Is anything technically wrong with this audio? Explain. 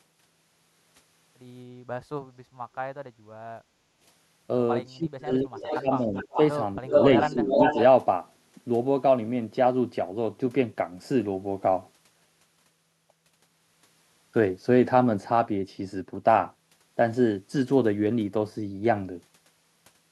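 Yes, there are three kinds of fault, all in the stretch from about 3.6 to 7.8 s of this speech recording.

Background gated by the echo canceller, 3.64 to 3.99 s: while the far-end loudspeaker was active, the echo canceller clamped down on the microphone, and the room tone sank by about 11 dB for roughly 0.4 s before recovering. The gap sounds like a brief hollow hush in the ambience. On a waveform the noise floor narrows abruptly. On a spectrogram the faint broadband background fades to a darker band and then fills back in.

Speech suppressed in double talk, at 4.97 to 5.5 s, 5.81 to 6.38 s, 6.81 to 6.94 s and 7.33 to 7.77 s: both sides were likely talking at once, and the canceller, unable to tell the local talker from loudspeaker echo, attenuated everything. The first dip reaches about 25 dB, the third about 20 dB, and the second and fourth about 10 dB. The voice ducks, thins or breaks into fragments. 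A waveform shows the speech envelope pinched into notches. A spectrogram shows harmonics and upper formants fading out during those spans.

Echo leak, 5.39 to 6.38 s and 6.92 to 7.83 s: this is likely residual loudspeaker pickup that the far end's canceller failed to remove and sent back. It appears as a copy of the speech trailing by 0.37 s. In the first span it sits about 10 dB below the direct speech. In the second it is about as loud as the speech, so a doubled, smeared voice is heard. On a spectrogram the harmonic pattern repeats shifted 0.37 s later. The waveform shows overlapping, ghosted bursts.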